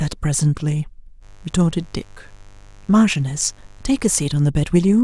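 At 1.2 s a mains buzz starts under the speech and runs until 4.31 s. It is a steady, raspy buzz, not a smooth hum. Sharp switching spikes entered the signal path twice in each 50 Hz mains cycle, probably from a dimmer, a rectifier or poor shielding. Those spikes carry harmonics of 50 Hz well up into the kilohertz range. The buzz sits around 30 dB below the speech.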